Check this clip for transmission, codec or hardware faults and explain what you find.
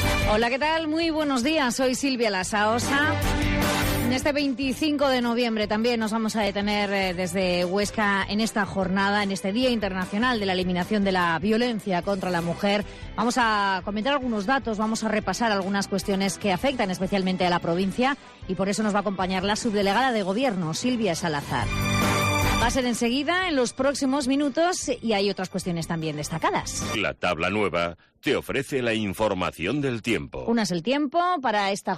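One fault is audible. Dropped samples at 6.47 s: the stream likely lost about 0.7 ms of data, so the waveform jumps abruptly to a later value, producing a single sharp click.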